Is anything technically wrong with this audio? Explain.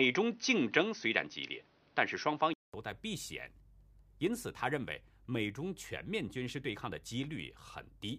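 Yes. From the start to about 2.74 s, the speech is band-limited, with nothing above 6.2 kHz. A poorer input device was likely active, narrowing the band. Its own faint noise sits well below the speech. Then comes a 200 ms silence, a level jump of roughly 5 dB, and fuller sound.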